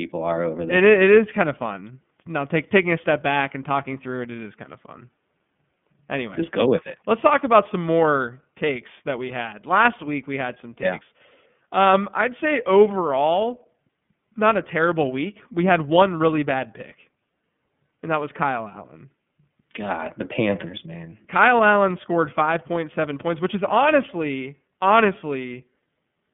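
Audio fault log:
Throughout, iLBC codec: narrowband, slightly rough and synthetic speech with nothing above about 3.7 kHz, from coding each 30 ms frame independently at 13.33 kbps.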